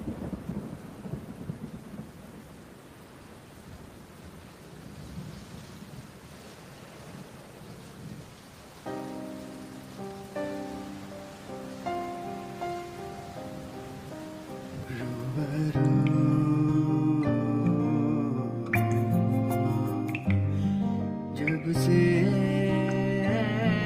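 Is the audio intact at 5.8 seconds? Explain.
Yes, the audio is intact at 5.8 seconds, with no dropout, click, distortion or other fault at that moment.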